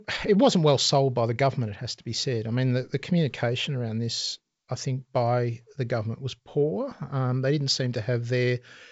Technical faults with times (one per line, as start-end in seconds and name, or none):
none